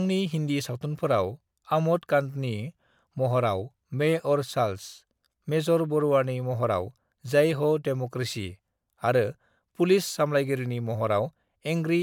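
Speech throughout shows generation loss: a swirly, hollow smear with blurred consonant onsets, likely from about three successive MP3 re-encodes, which fits a 128 kbit/s chain. A spectrogram shows a hard ceiling near 19.9 kHz and patchy, flickering holes across the upper bands.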